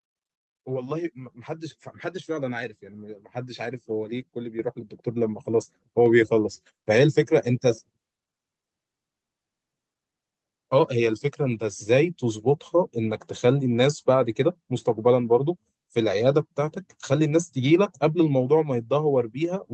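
Microphone volume stepped up at 4.59 s: the call software raised the input gain in a single step, so speech and background jump together by about 8 dB.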